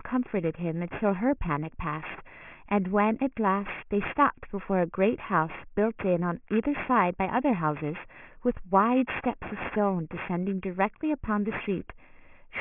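Aliasing throughout: an unfiltered rate drop, fitting 6 kHz, folds sibilants below 3 kHz, gritty and metallic; spectrograms show mirrored energy jammed against 3 kHz.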